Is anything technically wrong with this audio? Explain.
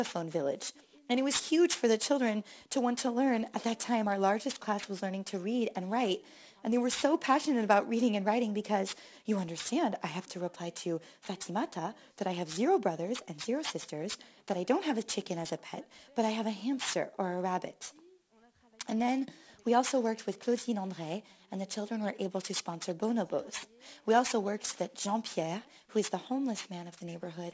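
Yes. Throughout the clip the high end sounds gritty and metallic, with harsh, unrelated tones roughly 15 dB below the signal and the spectrum pressed hard against 8 kHz. This is aliasing: the sample rate was dropped, likely to 16 kHz, without an anti-aliasing filter, so content above 8 kHz folded back down as false frequencies.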